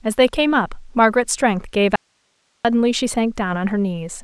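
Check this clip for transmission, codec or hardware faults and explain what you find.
One fault stands out in the speech: an audio dropout to a faint residue from 1.96 to 2.65 s. The speech cuts off abruptly and returns just as suddenly about 0.69 s later. In between, only a thin hiss remains, roughly 45 dB below the signal, with no fade or natural pause around it. The likely cause is a brief loss of the incoming signal while the path after the break stayed live, so its own noise floor carried through the gap.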